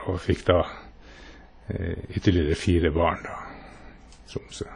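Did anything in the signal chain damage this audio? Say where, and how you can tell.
Yes, at the codec stage, throughout the speech. Nothing sounds above 10.1 kHz, and the audio rings and washes, with hiss that breathes with the signal. This is likely WMA compression at a low bitrate, near 32 kbps. Long transform blocks smear quantisation noise, and weak lines are zeroed.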